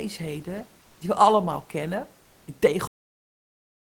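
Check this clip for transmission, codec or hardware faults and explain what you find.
Three kinds of fault turn up: two stretches of comfort noise standing in for the real background, a clipped onset right after the first of those, and an ending that's chopped off.

Comfort noise in place of the background runs from 0.81 to 1.01 s and again from 2.23 to 2.47 s, about 200 ms and 240 ms long. In both gaps the genuine room noise, which sits about 35 dB below the speech, gives way to a flat, featureless hiss. It's about 3 dB quieter in the first gap and about 2 dB quieter in the second. That's likely discontinuous transmission, as in Opus DTX: the sender stops sending during pauses and the receiver fills them with synthetic noise.

The onset clipped by the voice detector falls at 0.99 to 1.01 s, right where the first comfort-noise patch ends. About 20 ms of the start of the sound is missing, so it comes in hard without its soft rise. 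The likely cause is the same DTX voice detector being slow to notice the speech had resumed. Those first milliseconds were never sent, and synthetic noise played in their place.

The cut-off end comes at 2.87 s. The audio stops dead mid-sound and drops straight to digital silence, with no decay, for the rest of the clip. The final buffers were never written out or played, so the tail of the sound simply never arrived.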